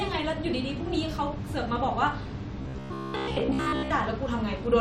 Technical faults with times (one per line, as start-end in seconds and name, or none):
2.62-3.92 robotic sound from repeated short buffers